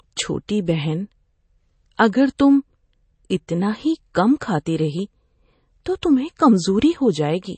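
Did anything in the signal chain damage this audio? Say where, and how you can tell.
Yes. The codec stage did it: the treble stops dead above 8.3 kHz throughout the speech and sibilants sound watery and swirly, which points to a low bitrate around 32 kbps, likely from MP3 compression. A fixed cutoff with flickering weak bands separates this from plain low-pass filtering.

Pre-echo appears at 0.48 s as a brief hiss, about 11 ms long, just ahead of a sharp attack that sounds softened. The transform block spread its quantisation noise backward into the quiet lead-in. Because the hiss comes before the attack rather than after it, this is not reverb or a click.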